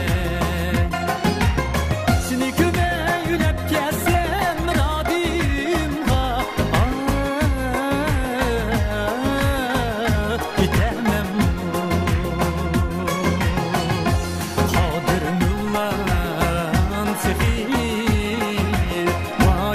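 Something in the system is stalling the USB bus or audio driver every 2.0 s, causing periodic USB or driver dropouts from 0.15 s to 18.14 s. Each stall skips roughly half a millisecond of audio outright, so around ten small, evenly spaced ticks punctuate the sound.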